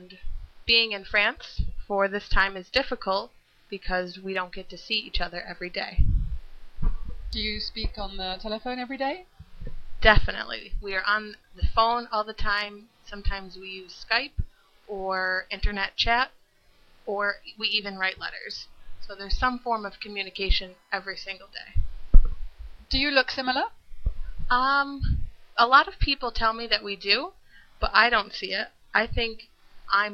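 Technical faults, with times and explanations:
19.24 to 21.24 s, USB whine: a thin, steady whistle at a fixed 1 kHz sits faintly beneath the sound, well below its level. The USB bus draws current in regular 1 ms frames, and that periodic load leaks into the audio through shared power or ground.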